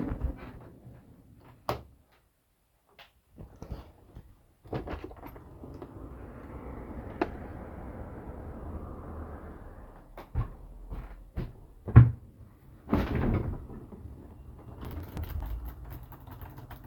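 From 14.85 to 15.42 s a burst of gritty crackle tears across the sound, then stops. This is processor overload crackle: the processor missed about fifteen buffer deadlines in quick succession, each skipping a buffer of around 5 ms and leaving hard-edged gaps.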